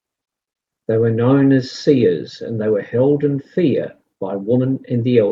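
No technical faults can be heard anywhere in this speech, so there are none to describe in time order.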